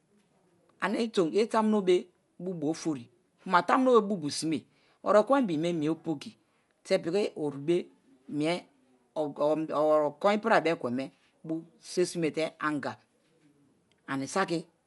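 Throughout, the speech sounds dull and rough, most likely from Dolby Digital compression at a low rate, which fits 64 kbps. Nothing survives above 11.4 kHz, and noise-filled bands flutter around voiced tones. A spectrogram shows a hard ceiling and speckled, patchy harmonics.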